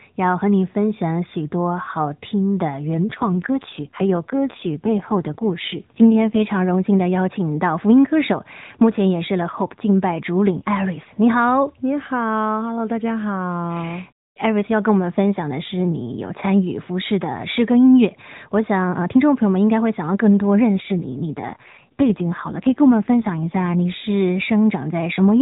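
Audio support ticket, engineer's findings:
Speech turns rougher, buzzier and more synthetic at 3.06 to 6.40 s and 20.76 to 23.75 s, with no dropout and no bandwidth change. AMR rate drop on the AMR-NB link, consistent with 12.2 falling to 5.9 kbps: fewer bits per frame, coarser vocal-tract model.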